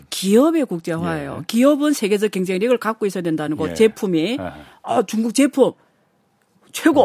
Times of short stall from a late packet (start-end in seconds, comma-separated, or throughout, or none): none